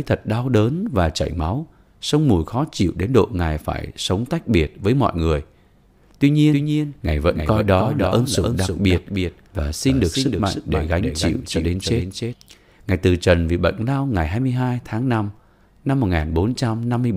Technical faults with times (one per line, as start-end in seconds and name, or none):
6.52-12.34 doubled audio track